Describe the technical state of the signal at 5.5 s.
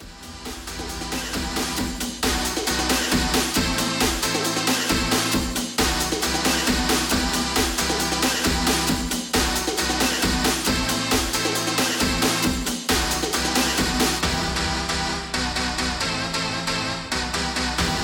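At 5.5 s the signal is intact, with no dropout, distortion, glitch or other technical fault audible at that moment.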